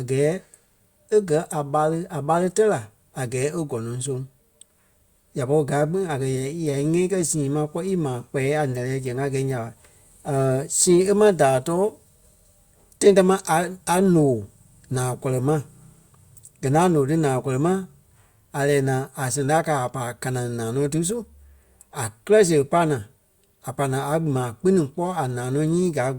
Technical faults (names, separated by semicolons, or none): none